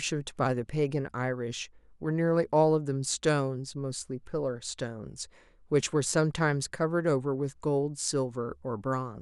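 No faults detected in the speech recording.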